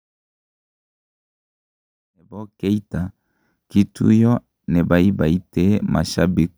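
Nothing stood out on listening to the speech, where the smooth fade-in at the opening, rising from about 2.0 s and reaching full level by about 3.1 s, is an ordinary editing choice.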